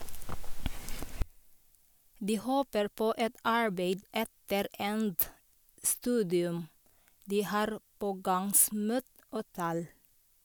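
From 1.22 s to the end, the speech drops about 25 dB to a faint residue, likely one channel inverted cancelling in mono; the waveform collapses, spectrogram faint.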